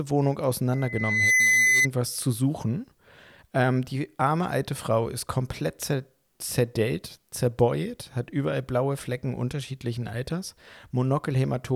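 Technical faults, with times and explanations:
0.73–1.88 s: loudspeaker feedback squeal. A 2 kHz tone swells over about half a second to around 5 dB above the speech, stopping before "zu suchen". The microphone caught its own loudspeaker, and the loop gain exceeded one at that frequency.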